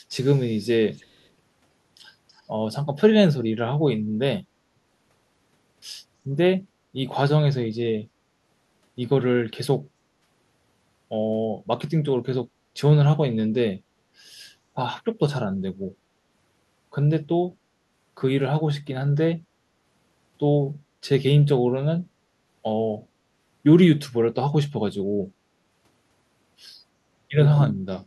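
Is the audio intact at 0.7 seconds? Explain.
No. From 0.11 to 0.73 s an echo leak adds a faint copy of the speech delayed by 326 ms, likely loudspeaker pickup that an echo canceller failed to remove.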